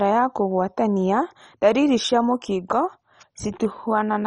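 Throughout the speech, likely MP2 compression starved of bits, consistent with roughly 32 kbps, shuts off the upper sub-bands, leaving nothing above 10.3 kHz and a heavily dull, gurgling, granular sound.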